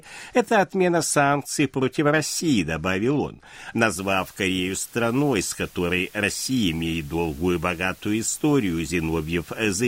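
From about 3.99 s to the end, the speech sits on a steady, even hiss with no crunch or distortion. That's low bit depth with dither: rounded to something like 8 bits, with dither turning the error into white noise, roughly 25 dB below the voice.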